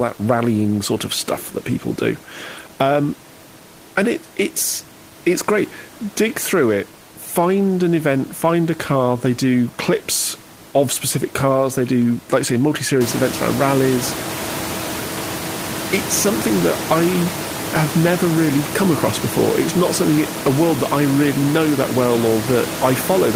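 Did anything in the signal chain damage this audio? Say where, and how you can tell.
No, nothing in the signal chain stood out as damaging this speech on listening; the room's background noise rises by about 16 dB at roughly 13 seconds and stays about 10 dB below the speech, but that belongs to the recording space.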